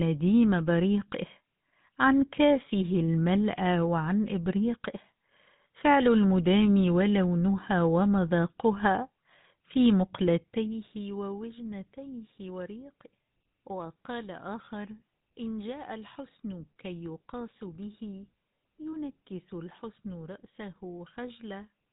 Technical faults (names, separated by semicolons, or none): GSM full-rate codec